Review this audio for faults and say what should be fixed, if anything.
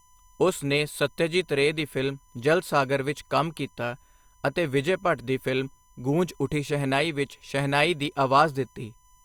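A steady USB whine runs through the whole clip at a fixed 1 kHz, sitting roughly 35 dB below the speech. The pitch points to the bus's 1 ms frame timing: each frame's burst of current draw modulates the supply or ground shared with the audio interface or microphone preamp, and that periodic disturbance lands in the signal path as a constant tone. Because it is fixed in pitch, it stays audible under and between phrases.

To prevent it, power the audio device from a clean supply or a powered hub with a USB isolator or ground-loop isolator, and keep the analog cabling away from the USB cable and host.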